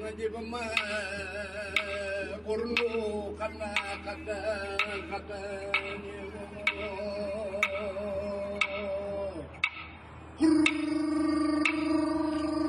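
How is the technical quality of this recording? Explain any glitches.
Quality drops once, near the end of the clip. From 8.59 s to 12.69 s the player switches to an adaptive stream at a lower bitrate: treble above 10 kHz disappears abruptly, without a gap, and coding artefacts grow, consistent with a drop from roughly 96 to 24 kbit/s.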